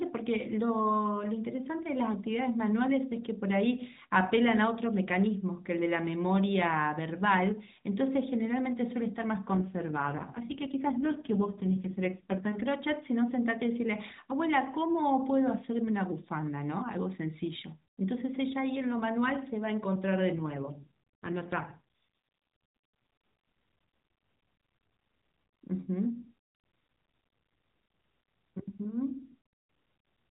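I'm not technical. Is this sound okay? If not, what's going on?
No. There is an AMR rate drop twice, from 9.52 to 12.52 s and from 20.36 to 21.79 s. The speech comes through a mobile phone codec with a narrow, telephone-like sound. During those stretches, the phone network had the codec describe the voice with far fewer bits, spending the rest on protection against a weak signal. The voice turns rougher, buzzier and more robotic, with no gap, then recovers when the rate goes back up.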